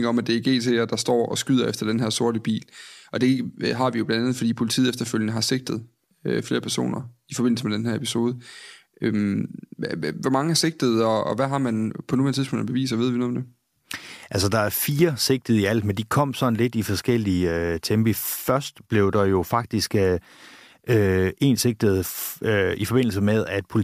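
No technical faults are audible anywhere in the recording.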